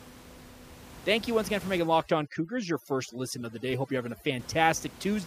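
From 1.79 s to 4.39 s, just after "you once again for", the background drops and breaks up into twinkling specks. This is overdone noise removal. The reducer is set so aggressively against the room noise, which sits about 18 dB below the speech, that it cuts individual frequency bands whenever they come near its noise estimate, taking quieter parts of the speech with them.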